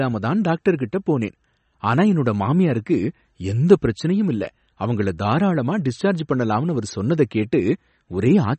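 Likely MP3 compression throughout: treble stops at 8.3 kHz and weak detail flickers, giving plainly watery, swirly speech that fits a bitrate around 34 kbps.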